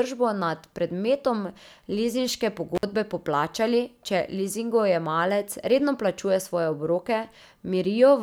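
Intermittent contact at 2.75 to 2.83 s: a loose cable or plug connection briefly parts, so the speech drops out for about 54 ms. Crackle marks both edges of the gap, and faint hiss remains while the line is open.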